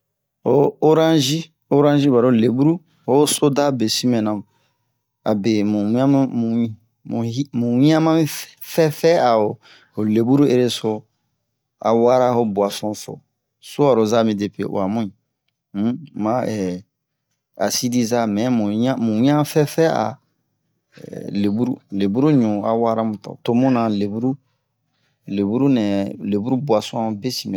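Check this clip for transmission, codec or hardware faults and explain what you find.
Listening through the speech, nothing in the signal points to a transmission, codec or hardware problem.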